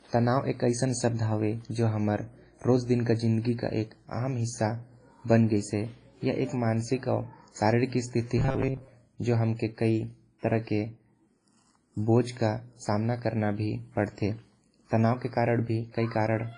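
Throughout the speech, a transform codec with long blocks has likely spread quantisation noise over tens of milliseconds and zeroed weaker components, which fits WMA at a low bitrate around 24 kbps. The damage is heavy: ringing, washy tone, hiss that breathes with the voice, nothing above 10.4 kHz.

From 8.38 to 8.93 s, new audio arrived too rarely and the playback path repeated each short buffer, roughly seven tenths of the time, while real audio was skipped. The result is robotic sound from repeated short buffers: a rigid, metallic 133 Hz buzz, which fits a buffer about 7.5 ms long.

From 10.39 to 10.43 s, a sharp attack fell late in a codec block, so noise sized for the loud onset filled the quiet moment before it. This pre-echo is heard as a 37 ms hiss leading into the attack, which sounds softened and smeared.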